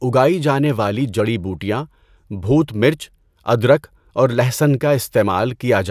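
Nothing in the speech stood out as a technical problem on listening.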